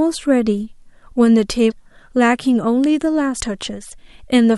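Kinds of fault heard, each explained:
Damaged data in a compressed stream: corrupted bytes make the decoder lose sync and hunt for the next frame, giving a brief glitch around 1.70 to 1.72 s and again at 3.39 s.
Electrical switching spike: a sharp snap lands on top of the speech at 2.84 s, likely a nearby switch or static discharge arcing into the audio line.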